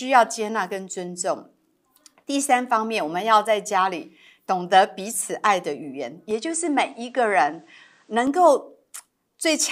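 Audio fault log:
6.31–8.27 s, input switched to a poorer device: the speech abruptly loses its top end, with nothing above 9.5 kHz, so it turns duller for about two seconds before the fuller sound returns. There is no gap at either switch and the level holds steady. A faint new noise floor sits roughly 45 dB under the speech. The likely cause is the recording input changing mid-take to a microphone or headset path with a narrower band and its own background noise.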